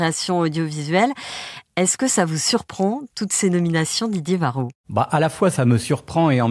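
No technical faults can be heard anywhere in the speech recording.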